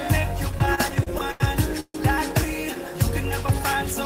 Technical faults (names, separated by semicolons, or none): repeated stalls (stutter); call audio freeze